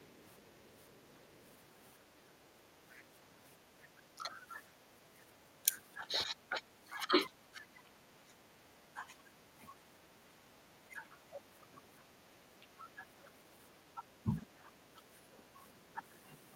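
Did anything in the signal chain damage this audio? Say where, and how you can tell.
Yes. Speech suppressed in double talk occurs at 0.0 to 0.14 s, 2.23 to 2.6 s, 3.94 to 4.61 s and for about 5 s within 5.63 to 15.62 s. The speech dips by about 10 dB, and by about 15 dB near 4 s. This is likely call-processing echo control, which ducks the near talker while the far end also speaks.

The other side's voice leaking through appears from 0.37 to 1.5 s as a faint second voice about 35 dB below the speech. Here the echo canceller in the call-processing stage likely left some loudspeaker playback in the microphone signal.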